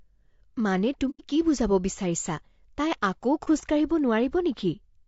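Low-delay AAC compression runs through the whole speech clip: the voice sounds rough and grainy, with noise filling the gaps between harmonics and a thin, synthetic-sounding top band. This is likely an AAC-ELD encoder's short frames starved of bits, which fits a bitrate around 32 kbps.

AAC frame loss with muting appears from 1.10 to 1.24 s: about 90 ms of audio fades into a soft-edged silence and back. The decoder zeroed the missing spectrum, and the overlapping windows smoothed the gap's edges. The length points to three consecutive frames lost.

At 3.44 to 3.48 s the same AAC frame loss with muting recurs more briefly, a 30 ms dip to silence with gentle fades rather than a sharp cut, which fits a single lost frame whose spectrum the decoder replaced with zeros.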